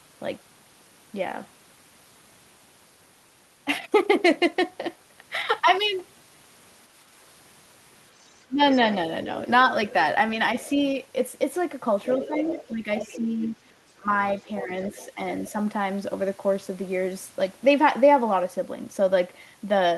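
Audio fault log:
8.22–8.95 s, 9.55–9.93 s and 12.04–15.5 s: other side's voice leaking through. A faint second voice sits under the speech, roughly 15 to 20 dB down and strongest in the long stretch from 12 s. It's likely loudspeaker sound reaching the mic that the echo canceller didn't fully remove.
8.47–8.61 s, 12.18–14.09 s and 14.65–15.2 s: speech suppressed in double talk. The talker dips while that leaked voice is present. The short drop near 8.5 s goes down about 20 dB, and the later ones are shallower, around 10 dB and then a few dB. It's likely the echo canceller ducking both sides when they overlap.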